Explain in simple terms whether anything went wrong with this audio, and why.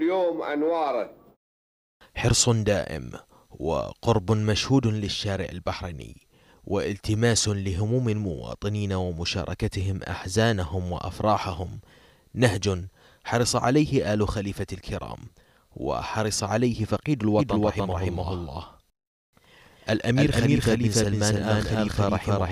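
From 17.39 s to the end, a doubled audio track appears. An equally loud copy trails about a third of a second behind, likely from a second, slower recording path.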